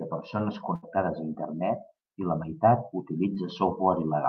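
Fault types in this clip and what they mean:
Burst of packet loss: several consecutive packets failed to arrive in time, so the receiver stretched the last received sound for about 71 ms while fading it down. At 0.75 to 0.85 s the speech turns into a brief held, dimming sound, and when the audio picks up again roughly 80 ms of speech has been skipped, so the flow jumps forward rather than resuming where it stopped.
Short concealed packet loss: a tiny stretch of the stream, about 20 ms, missed the decoder, which papered over it with roughly 11 ms of extrapolated sound before crossfading back into the real signal. At about 3.35 s, just after "i la meitat", this comes across as a quick smear or wobble in the speech.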